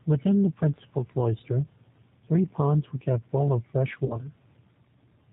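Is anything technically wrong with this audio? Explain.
Yes. Throughout, the speech sounds rough, slightly synthetic and dull, with nothing above 4 kHz. This is G.729 codec damage: speech rebuilt from a filter, a pitch predictor and sparse pulses, consistent with 8 kbit/s.

From 4.06 to 4.17 s, the speech is stretched and fades, and stays weak afterward. This is VoIP packet loss concealed by the speech codec: about 40 ms went missing, consistent with four 10 ms frames, and the decoder extrapolated from its last state.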